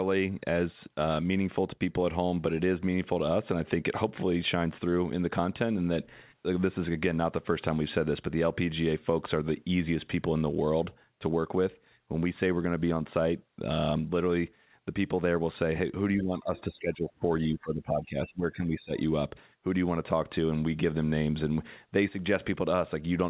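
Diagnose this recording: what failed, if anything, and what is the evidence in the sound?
The fault is in the call processing stage: speech suppressed in double talk. The speech dips twice, from 16.17 to 17.26 s and from 17.52 to 18.92 s. Each time it drops by up to about 20 dB. The likely cause is an echo canceller that could not separate near speech from loudspeaker echo, so it attenuated both.

The second fault is in the same stage: the other side's voice leaking through. A brief scrap of it appears from 17.02 to 17.07 s, about 25 dB below the speech. It sits inside the first dip. The likely cause is residual loudspeaker echo that the canceller left in the microphone signal.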